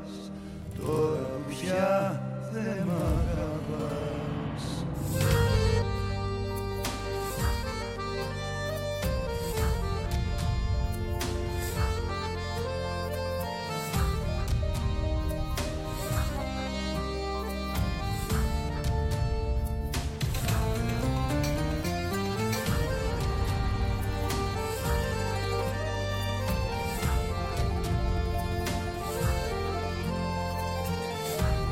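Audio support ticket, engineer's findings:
Doubled audio track from the top through 5.82 s, already running when the clip opens. Second full-band copy trails by roughly a tenth of a second at about equal level. Dry, no room tail, stops abruptly. Likely a duplicate capture via a slower path, or two out-of-step copies in the edit.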